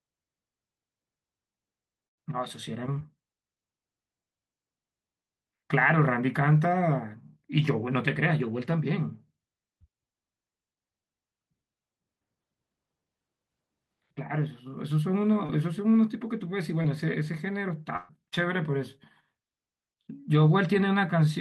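A speech recording with two kinds of network dropout. Brief smears or small wobbles interrupt the voice at 2.99–3.02 s, 15.46–15.50 s and 16.82–16.86 s. Each is short concealed packet loss: about 20 ms of audio failed to arrive in time, and the receiver bridged the hole by extending the preceding sound for roughly 14 to 19 ms before blending back into the real signal. At 17.96–18.11 s the sound becomes a sustained, decaying extension that lasts noticeably longer, then jumps ahead. This is a burst of packet loss. About 120 ms went missing in a row, and the receiver kept synthesising from the last sound for around 127 ms, fading it rather than leaving silence, so that stretch of speech is simply gone.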